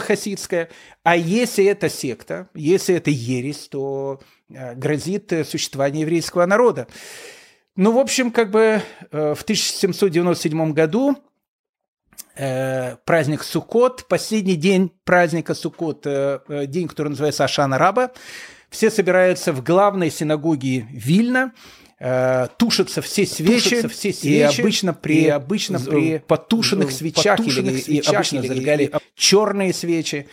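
From 23.32 s to 28.98 s, the speech is joined by a second copy of itself, about 5 dB quieter, trailing about a second behind, clean and undecayed, which cuts in and out abruptly. This doubled audio track is likely an edit or second capture path layering two offset copies.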